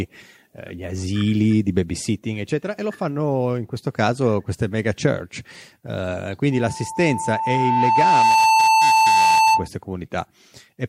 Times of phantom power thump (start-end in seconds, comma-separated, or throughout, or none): none